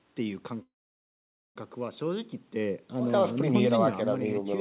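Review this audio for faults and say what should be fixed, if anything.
From 0.62 s to 1.58 s the speech stops: a brief fading tail of the last sound, then about 0.87 s of silence before it resumes where it left off. This call audio freeze likely comes from delayed packets emptying the jitter buffer, adding a gap of about 0.94 s with nothing lost. To prevent it, stabilise the network path and allow the jitter buffer enough depth to absorb such delays.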